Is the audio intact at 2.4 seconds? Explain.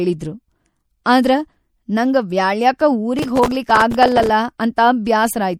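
No. At 2.4 seconds, as throughout the speech, the audio shows MP3 compression, likely at a low bitrate, around 64 kbps. Short of bits, the encoder drops weak frequency lines that flicker between frames, giving a plainly audible watery, swirly texture with smeared attacks.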